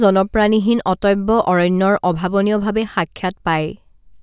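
A short speech recording with no audible technical faults anywhere in the signal.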